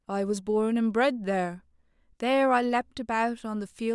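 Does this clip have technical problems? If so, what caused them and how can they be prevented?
No, this speech clip has no technical problems. With nothing at fault, there is no cause to trace and nothing to prevent.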